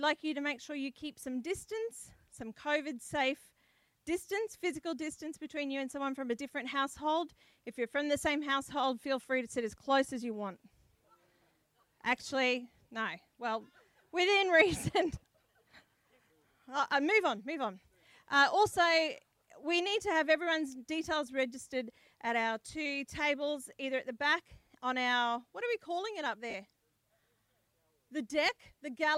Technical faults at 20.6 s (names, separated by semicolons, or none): none